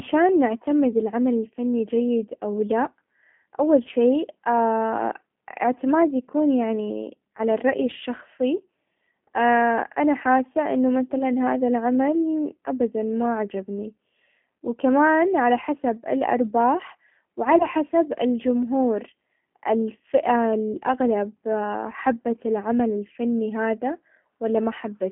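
From the start, the speech carries G.729 codec damage. The sound is confined to a telephone band of roughly 150 Hz to 3.4 kHz and has a plainly rough, synthetic edge, consistent with an 8 kbit/s G.729A coder. That coder rebuilds each 10 ms stretch from a vocal tract filter, a pitch predictor and a few pulses. On a spectrogram, energy stops sharply at 3.4 kHz with little below 150 Hz, and the harmonics look smeared and grainy.

VoIP packet loss concealed by the speech codec then appears three times. The first is at 11.19 to 11.23 s, which fits one lost 10 ms frame. The second, at 17.58 to 17.66 s, fits two frames. The third, at 20.73 to 20.77 s, fits one frame. Each time the decoder stretches its last pitch and filter into a brief buzzy tone or coloured noise that fades, and the sound stays weak until the predictor recovers. A waveform shows a short, regular-looking dip in level, and a spectrogram shows a frozen, steady spectrum in place of changing formants.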